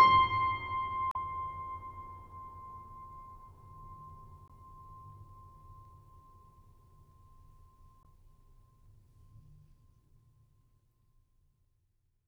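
A music clip with three short bursts of damaged data in a compressed stream, at 1.11–1.16 s, 4.46–4.51 s and 8.02–8.06 s, each lasting roughly 40 to 50 ms. At each point some bytes of the encoded stream are corrupt, so the decoder misreads or rejects those frames, loses frame sync and hunts for the next valid header. The result is a brief chirp, squawk, click or short hole cutting across the music.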